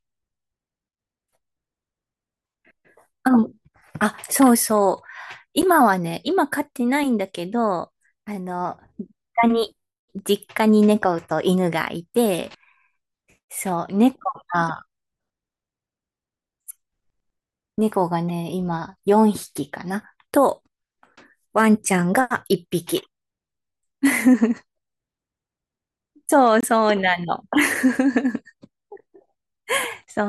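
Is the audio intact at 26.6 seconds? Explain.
No. From 26.61 to 26.68 s, a corrupt frame was decoded. Flipped bits in the compressed data reached the decoder, and it played the damaged material anyway. Misread codes and wrong gains put energy at frequencies where it doesn't belong. The result is a brief chirp, squeak, blip or burst of noise. It peaks fairly loud, around -10 dBFS. Its length of about 70 ms fits a handful of frames, perhaps four.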